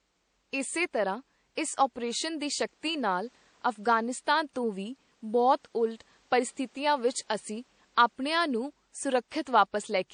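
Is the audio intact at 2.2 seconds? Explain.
No. At 2.2 seconds, as throughout the speech, the sound is dull and swirly with smeared detail, which fits MP3 audio from around 48 kbit/s likely saved again at a high bitrate. Re-encoding cannot restore the removed content, so the first encoder's artefacts remain.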